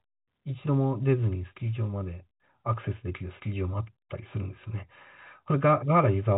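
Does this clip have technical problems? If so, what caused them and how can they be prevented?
No, no technical faults here.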